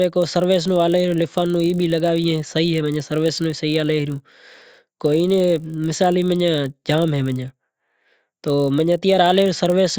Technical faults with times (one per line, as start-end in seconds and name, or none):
0.00-9.99 resampler restarted on every block